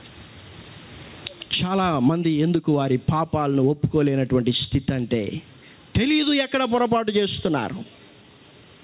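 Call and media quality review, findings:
Gain pumping, throughout. Gain swings by about 15 dB. Loud and soft parts squashed together. Likely cause: input gain set too high, with a fast limiter clamping every peak.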